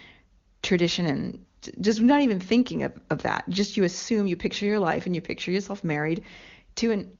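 Nothing stood out on listening to this speech clip, which carries the full, clear wideband character of AMR-WB (HD Voice) at one of its higher rates.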